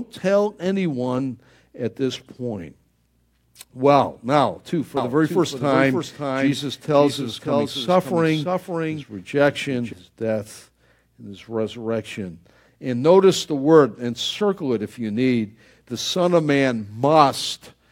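A speech clip with a doubled audio track from 4.97 s to 9.93 s, between "now too for" and "his death and his". A second full-band copy trails about half a second behind, roughly 5 dB quieter, with no room colour. It starts and stops abruptly. The likely cause is a second capture path or an out-of-step edit.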